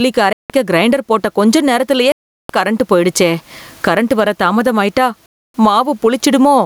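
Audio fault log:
throughout: gain pumping. The level breathes with the speech. The swing is around 15 dB. Loud and quiet passages sit unnaturally close in level, so the speech sounds squashed. The likely cause is a microphone gain set far too high, with a fast limiter or compressor clamping every peak. The room noise sits about 44 dB below the speech.
0.33 to 5.54 s: Bluetooth stall. The sound drops to silence three times: 0.33 to 0.50 s for about 170 ms, 2.12 to 2.50 s for about 370 ms, and 5.26 to 5.54 s for about 280 ms. Each time the audio stops dead and then resumes. These are likely stalls on the wireless link. Radio interference held back packets, the headphones' buffer ran empty, and playback waited until the resent packets arrived.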